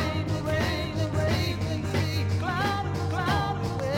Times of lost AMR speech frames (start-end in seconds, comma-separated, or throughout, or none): none